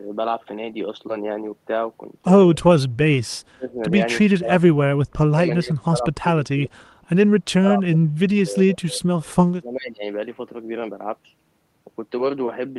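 Speech suppressed in double talk at 3.37–3.92, 4.73–6.07 and 7.49–10.04 s: the speech ducks unevenly by up to about 30 dB, likely from echo-canceller gain reduction rather than clean packet-loss gaps.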